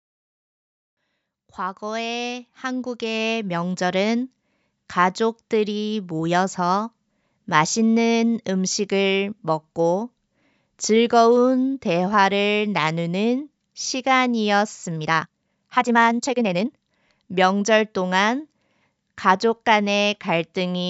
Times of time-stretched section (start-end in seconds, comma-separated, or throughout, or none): 14.94-16.70